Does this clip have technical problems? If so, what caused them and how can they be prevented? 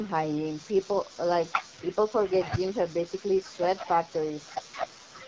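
Yes. The AMR wideband (HD Voice) codec runs at 8.85 kbit/s throughout. At this low rate the pulse-driven speech model leaves the speech rough and raspy. Use 12.65 kbit/s or higher.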